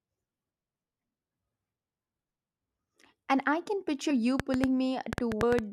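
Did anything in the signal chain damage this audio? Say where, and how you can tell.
Yes. In the codec or storage stage, compressed frames were skipped at 4.1 s, just after "I can", and at 5.42 s. It fits 21.3 ms frames, with roughly two frames (about 40 ms) lost first, then about five (about 100 ms).

A train of clicks runs from 4.40 to 5.60 s. There are about ten similar pops at roughly six per second, unevenly spaced, peaking about 20 dB above the speech. The likely source is electrical interference in the analogue wiring or a faulty connection or power supply injecting pulses.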